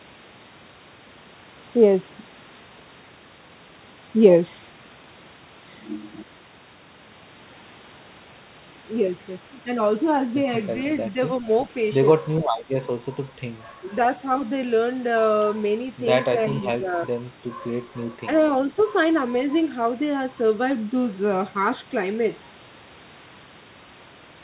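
Brief level dips in the speech at 11.40–11.47 s, 13.80–13.84 s, 16.48–16.55 s and 16.72–16.87 s are likely speech suppressed in double talk. The echo canceller seems to have taken overlapping far-end activity for echo and pulled the near-end signal down with it. The dips are short, from about 40 to 150 ms, and shallow at first, about 5 dB at 11.4 s and 16.5 s and about 10 dB at 13.8 s. The deepest, about 15 dB at 16.72 s, sounds like a momentary swallowing of the sound rather than a full cutout.

At 18.77–18.85 s a faint delayed copy of earlier sound, probably an echo leak, arrives about 366 ms after the original, about 25 dB below the main speech. The loudspeaker-side echo canceller evidently left a residue that was sent back. It is heard as a brief ghost, confined like the rest of the audio below 4 kHz, which fits a narrowband G.711 call path.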